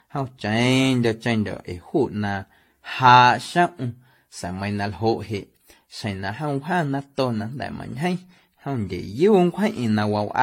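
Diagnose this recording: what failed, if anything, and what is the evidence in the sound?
Codec stage: generation loss throughout. The speech sounds swirly, hollow and smeared, consonant attacks blur, and nothing sits above 16.5 kHz. This likely comes from repeated decoding and re-encoding, about five passes, each quantising on a shifted frame grid, which fits a 64 kbit/s AAC-LC chain.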